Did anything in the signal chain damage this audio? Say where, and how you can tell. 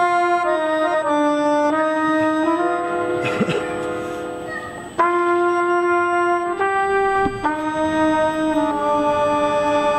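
Yes: a fixed 8 kHz whine, loudest at 16 kHz, runs throughout. It is USB whine, from 125-microsecond bus microframes leaking into the analogue power or ground.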